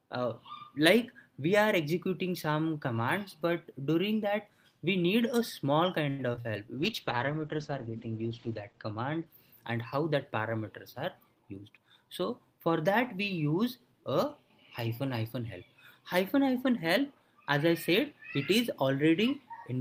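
Around 6.09 to 6.53 s there's a burst of repeated packet loss that gives a robotic sound. Four quick holes land close together, the longest about 94 ms. Each one gets patched by stretching the previous sound, so roughly 40% of that stretch is filler, and it comes out choppy with pieces missing.

Just after, from 6.77 to 9.64 s, a call bitrate drop kicks in. The top end collapses from 20 kHz down to 8 kHz and the coding gets coarse, which fits the encoder falling from around 32 kbps to about 11 kbps. It sits at its worst for about 1.8 s, sounding muffled and watery.

Then at 11.20 to 11.78 s there's a jitter buffer speed-up. The receiver trims tiny pitch-period slices to shed backlog, cutting something like 70 ms in total. The sound runs about 13% fast with unchanged pitch, so it feels briefly hurried.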